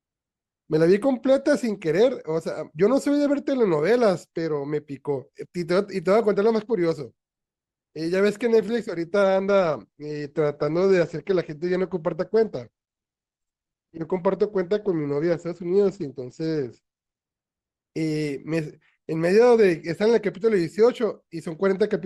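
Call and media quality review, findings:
Adaptive stream at a lower bitrate, 9.23–17.23 s: speech abruptly dulls and codec artefacts rise for 8 s, no gap. Likely cause: player switching down, consistent with roughly 64 to 16 kbit/s Opus. Spectrogram shows the high band cut off, then restored.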